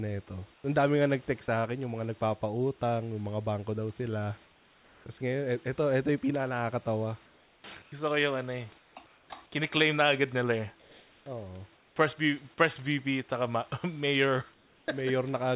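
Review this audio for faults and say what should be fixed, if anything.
Comfort noise in place of the background appears at 0.54–1.48 s (ending just before "sa akin yung mga"), 4.44–5.06 s (after "mga bangko daw sila"), 10.8–11.96 s and 14.54–14.88 s. In the 4.44 s and 14.54 s pauses, the real room background, about 33 dB below the loud parts, gives way to flat synthetic hiss about 4 dB quieter. This is likely discontinuous transmission with receiver-generated noise. To prevent it, disable DTX or match the comfort-noise level and spectrum more closely.

Sound dropped by the voice detector occurs at 1.46–1.48 s, right before "sa akin yung mga". About 10 ms of sound is lost to comfort noise. The likely cause is the detector taking quiet sound for background. To prevent it, lower the detection threshold or add look-ahead and hangover.

Sound chopped by the voice detector runs from 7.26 to 9.3 s. 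The detector toggles repeatedly, and about 900 ms in total is replaced by comfort noise. Quiet stretches stutter, likely because the speech sits near the threshold. To prevent it, lengthen the hangover time or turn off DTX.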